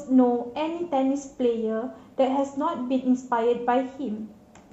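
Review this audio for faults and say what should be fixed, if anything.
No faults detected; nothing to fix.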